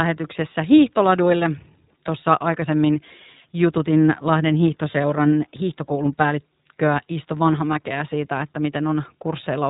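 Speech passed through the iLBC codec from start to finish, and the damage is plainly audible: the voice sounds slightly rough and synthetic because each 20 ms frame's excitation is coded on its own, with no help from the frame before. On a spectrogram everything stops sharply at 3.8 kHz, leaving an empty band above. The roughness fits the 15.2 kbps mode.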